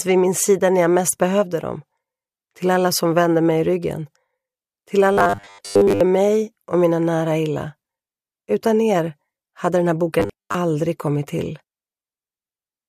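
From 5.13 to 6.03 s, and again from 10.20 to 10.55 s, the sound turns into a rigid, metallic buzz pitched at 100 Hz: robotic sound from repeated short buffers. Audio is likely arriving too seldom, so playback fills each gap by looping the last 10 ms segment while roughly 70% of the real material is skipped. That fixed loop length imposes the steady 100 Hz tone, which only loosely tracks the underlying sound.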